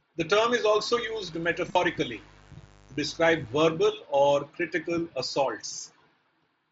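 From 0.92 s to 3.62 s a mains buzz sits under the speech, roughly 30 dB below it: a steady, raspy drone built on 50 Hz. It comes from sharp switching spikes, such as from a dimmer, rectifier or poorly shielded lead, leaking into the signal twice per mains cycle. That is why the buzz is harsh rather than a pure hum. On a spectrogram it appears as a ladder of evenly spaced horizontal lines at multiples of 50 Hz, running up into the kilohertz range and starting and stopping abruptly at those times. The waveform shows a thin, regular ripple in the gaps between words.

Inside that stretch, between 1.69 s and 1.75 s, there is concealed Bluetooth headset packet loss. About 45 ms of audio went missing across 60 ms, which fits several dropped headset frames, and the longest unbroken gap lasted 22.5 ms. The receiver covered each hole by repeating the best-matching piece of the preceding audio. What you hear is a brief buzzy, held tone at full level, then a slight warble as the real audio returns. 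On a waveform this shows as short, suspiciously periodic repeated cycles. On a spectrogram it shows as smeared, frozen harmonics instead of normal movement. All of this passes through the mSBC headset link, which limits the band to 8 kHz and adds light graininess on louder sounds.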